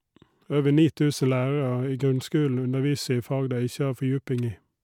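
No technical faults are audible anywhere in the recording.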